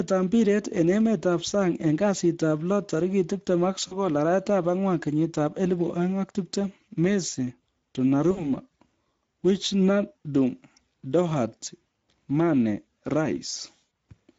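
Speex codec damage runs through the whole recording. The speech has a noisy, hoarse edge because the CELP coder has too few bits to rebuild the excitation faithfully, which suggests a setting around 16.8 kbps, and any content above 8 kHz is only a shaped noise fill.

VoIP packet loss concealed by the speech codec occurs at 3.87–4.00 s, 8.31–8.51 s and 13.89–13.91 s. Each time, about 40, 60 and 20 ms of data went missing, and the decoder stretched its last pitch and filter into a fading buzzy tone or coloured noise. The speech stays weak for a moment after each gap.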